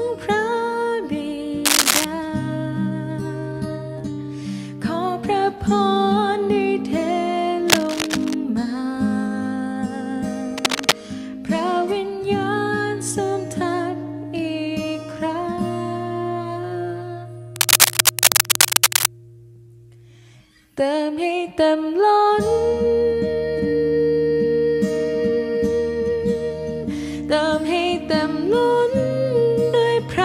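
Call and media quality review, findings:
Dense, uneven scratching bursts over the sound at 1.65–2.05 s, 7.65–8.34 s, 10.58–10.94 s and 17.56–19.06 s, from about level with the signal to about 5 dB above it. Cable scratch noise: likely a worn DC-carrying cable, connector or control being moved, contact resistance fluctuating rapidly.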